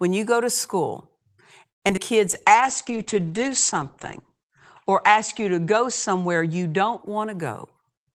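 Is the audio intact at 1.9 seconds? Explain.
No. Short concealed packet loss hits twice, at 1.88 to 1.91 s and again at 1.91 to 1.94 s. Each time about 20 ms of audio failed to reach the decoder in time, and the receiver bridged the hole by extending the sound just before it and then blending back into the real signal. The result is a quick smear or wobble at this exact moment, with a sliver of the sound lost.

It sits inside a larger disturbance. A call audio freeze runs from 1.69 to 1.84 s, likely because packets were held up in transit and the jitter buffer ran dry. The last sound is stretched into a brief fading buzz, then about 120 ms of silence, before playback resumes where it left off. Nothing is lost, but roughly 0.13 s of extra delay is inserted.

Right after, a skip ahead at 1.96 to 1.99 s drops something like 70 ms of audio while later audio was already queued. Playback lurches forward with almost no gap, joining the two sides nearly directly and winning back around 50 ms of the added delay.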